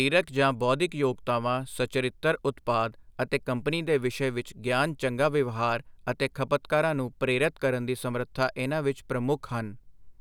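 No technical faults are audible.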